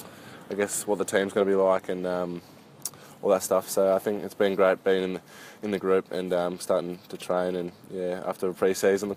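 No technical faults are audible.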